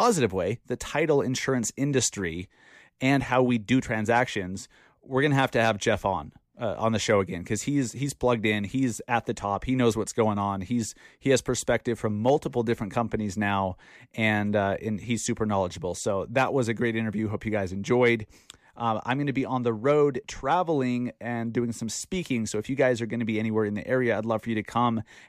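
No technical faults can be heard anywhere in this speech recording, so there is nothing to describe in time order.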